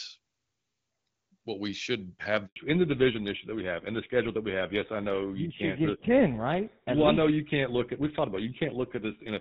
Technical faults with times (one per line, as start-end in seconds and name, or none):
2.46-2.56 handover gap
2.56-9.40 fallback to narrowband